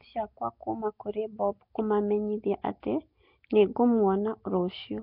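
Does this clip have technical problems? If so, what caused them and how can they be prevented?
Yes. The speech carries a rough, hissy halo and a smeared, underwater quality for its whole length, with heavy damage and nothing above 5.3 kHz, most likely from Nellymoser compression at a rate that fits about 22 kbps. The codec spends a fixed, small bit budget on short blocks, so weak bands get no bits and are replaced with noise. A spectrogram would show a hard ceiling at 5.3 kHz and grainy, speckled fill between harmonics. To prevent this, capture or export with a modern codec such as Opus at a higher bitrate instead of the legacy Flash microphone codec.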